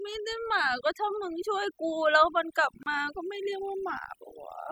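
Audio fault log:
throughout: overdone noise removal. A noise reduction stage set far too strong pushes individual frequency bands down or out whenever they sit near its noise estimate, taking quiet parts of the voice with them, so the background drops and breaks up into twinkling specks.
2.83 s: gap at a join of encoded pieces. Separately encoded segments were joined without trimming the encoder's start delay and last-frame padding, so a 31 ms gap opens in the speech, its edges smeared by the codec, before the sound resumes where it stopped.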